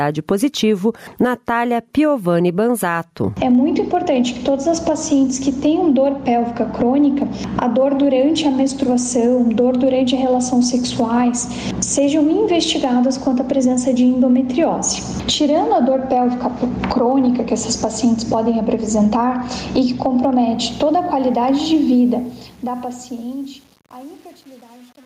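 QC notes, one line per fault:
throughout: gain pumping. The level swings by around 20 dB between the gaps and the loud sounds. Loud and quiet passages sit unnaturally close in level, giving a squashed, breathing quality. The likely cause is input gain set far too high for the microphone, with a fast limiter or compressor clamping down on each peak and releasing in the pauses.
20.46–25.05 s: truncation distortion on a fade. The fade-out starts around 20.5 s, and as the level drops the tail turns grainy and rough. From about 22.53 s to the end it is at its grittiest instead of sinking cleanly away. A digital volume stage is quantizing the decaying signal to coarse square steps without dither, which fits a stage keeping only about 10 bits.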